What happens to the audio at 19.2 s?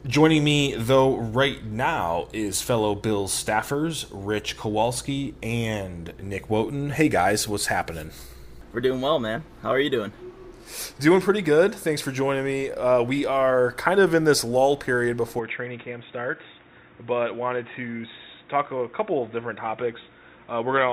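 By 19.2 s you're inside a stretch that runs from 15.39 s to the end, where the sound has gone dull and boxy, with nothing above 3.8 kHz, a drop of roughly 5 dB, and a faint new hiss well under the signal. There's no gap where it changes. That's most likely an input switched to a poorer device, such as another mic or a headset's call profile, with its narrower band, different level and its own noise floor.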